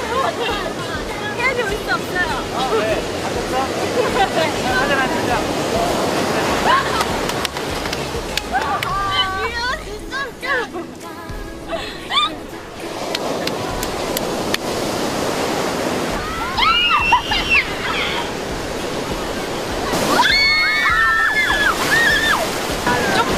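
No technical faults can be heard anywhere in the signal, which stays steady and intact throughout.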